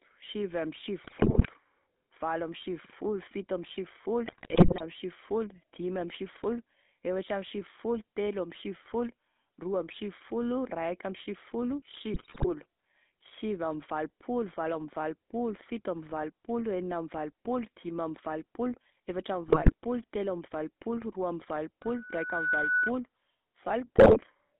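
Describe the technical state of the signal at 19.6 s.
At 19.6 s the signal is inside a burst of GSM bit errors running from 19.48 to 19.74 s. Corrupted bits are reaching the speech decoder, so the filter, pitch and gain values it rebuilds are wrong frame after frame. The result is squawking, gargling distortion with sudden jumps in level. Unlike a dropout or packet loss, the sound does not go silent or smooth over. It turns into harsh, wrong-sounding noise lasting about a quarter of a second.

Beneath that burst, and across the whole clip, is the GSM full-rate codec. Its vocal-tract model, driven by sparse regular pulses, gives the speech a buzzy, gravelly roughness. The band runs only from about 200 Hz to 3.7 kHz, which fits a narrowband telephone line carrying roughly a 13 kbps stream. What sets this apart from plain band-limiting is that grainy, rasping texture. A simple low-pass filter would sound muffled but clean.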